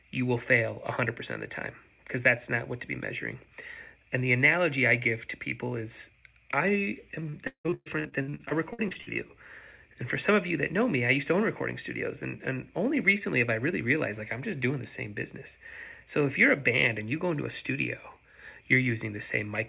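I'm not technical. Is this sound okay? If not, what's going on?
No. From 7.2 to 9.09 s there is repeated packet loss, which gives a robotic sound. Over those two seconds, bits of audio went missing on their way through the call well over a dozen times, the longest hole lasting 176 ms. Each time, the system filled the hole by stretching out the last sound it had, so roughly 40 percent of that stretch is patched-in filler. That makes it choppy, with pieces lost. The call line also carries nothing above 4 kHz, as is normal for this kind of phone connection.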